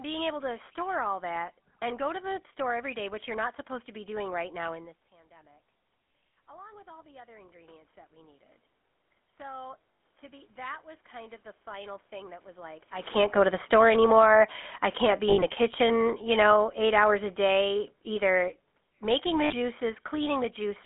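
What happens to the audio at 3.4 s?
At 3.4 s you're hearing the GSM full-rate codec, which runs through the whole clip, not a one-off glitch. The speech is squeezed into a phone-line band of roughly 300 Hz to 3.5 kHz, so it sounds thin and boxed-in. The coder rebuilds the voice from a vocal-tract model driven by a sparse, regularly spaced pulse train, which fits the old 13 kbps full-rate scheme. That's where the obvious buzzy, gravelly roughness on the voice comes from.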